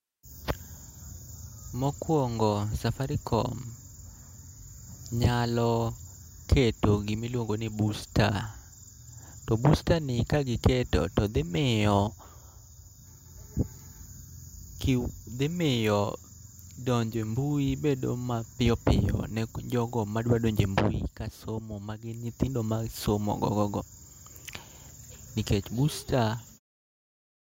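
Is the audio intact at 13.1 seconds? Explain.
Yes, the audio is intact at 13.1 seconds.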